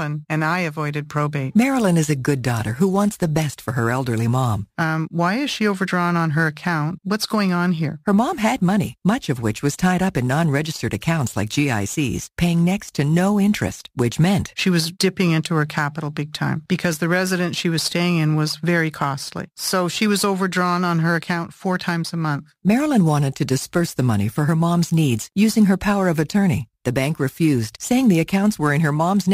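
A gritty, inharmonic fizz rides on the speech for the whole clip, growing on louder and brighter syllables and sitting roughly 25 dB below them. That is crude rate conversion by nearest-sample dropping with no filter, which fits a 48 kHz to 44.1 kHz change.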